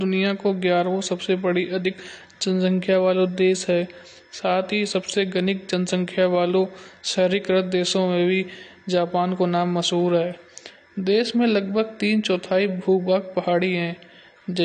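From start to finish the speech sounds dull and smeared, with nothing above about 9.9 kHz and a fizzy, warbling edge on sibilants. That's likely AAC compression, with a cut-off and texture that point to a low bitrate around 32 kbps.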